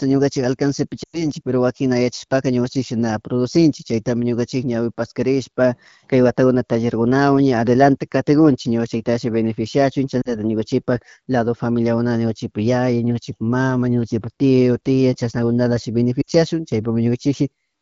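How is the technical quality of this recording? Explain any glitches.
The recording is wideband AMR-WB speech at 12.65 kbit/s with light codec coloration. There are three short dropouts from lost AMR speech frames:

At 1.03 to 1.27 s, about 100 ms of audio is missing, consistent with five consecutive 20 ms frames failing their checksum. The decoder holds the last good pitch and vocal tract parameters with falling gain, so the sound drops to near silence within two frames and recovers weak or rough.

At 10.22 to 10.29 s, roughly 40 ms drops out, pointing to two lost frames. The result is a short dip to near silence.

At 16.21 to 16.29 s, about 60 ms drops out, which fits three lost frames. There is a brief fade to near silence before the signal returns.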